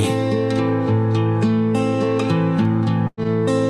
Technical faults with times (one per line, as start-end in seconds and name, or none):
3.07-3.19 burst of packet loss